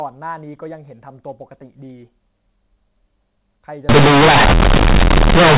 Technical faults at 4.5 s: companded audio read as linear

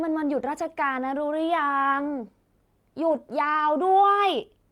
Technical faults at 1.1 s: none

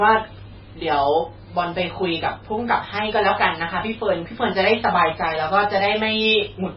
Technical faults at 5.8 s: MP3 compression

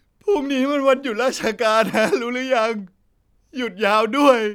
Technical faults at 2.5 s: none

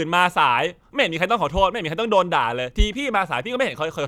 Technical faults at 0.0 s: none

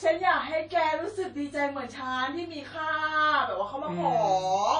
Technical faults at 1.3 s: WMA compression

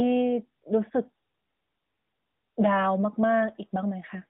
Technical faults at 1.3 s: AMR narrowband mobile codec

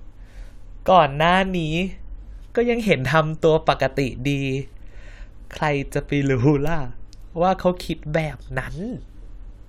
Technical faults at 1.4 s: none

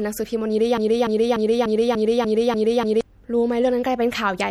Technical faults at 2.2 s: MP3 compression; broken-record loop

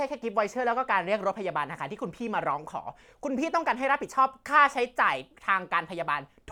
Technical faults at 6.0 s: none

